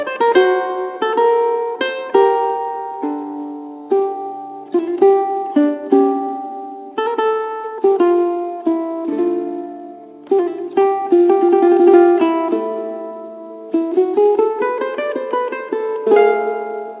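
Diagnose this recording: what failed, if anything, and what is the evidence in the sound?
No failure found; the recording shows no audible faults.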